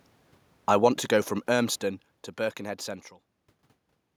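From 0.57 s the speech starts loud and then sinks steadily until about 2.68 s, ending roughly 11 dB lower, with the room noise behind it dropping by the same amount. That shared fall marks it as automatic gain falling: the gain control judged the input too loud or its background noise too strong and wound its gain down over about two seconds. A talker moving at the microphone would change only the voice, as happens near 0.5 s and 3 s.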